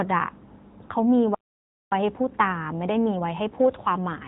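Throughout, the speech carries AMR narrowband mobile codec damage. Nothing above 3.8 kHz survives, and the thin, buzzy, synthetic texture fits the 10.2 kbps AMR-NB mode. At 1.35 s a playback stall cuts the speech to silence for 0.57 s until 1.92 s, likely because the player ran out of buffered data. From 1.92 s to the end, time-compressed catch-up hurries the speech at about 1.15 times normal speed without a pitch change.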